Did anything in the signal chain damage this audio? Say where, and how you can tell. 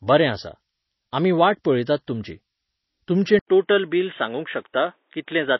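Yes. A switching supply whistle sits in the analogue power or wiring stage all the way through, a thin tone wandering between 8.8 and 10.6 kHz, roughly 40 dB under the speech.

MP3 compression is the likely culprit at the codec stage. Nothing survives above 5.8 kHz and the swirly, watery smearing is plainly audible, which fits a starved bitrate around 24 kbps.

At 3.39 s there's an 80 ms dropout, then the input likely switched to a poorer device. The band collapses to 3.8 kHz and a new noise floor appears about 50 dB down, with the level unchanged.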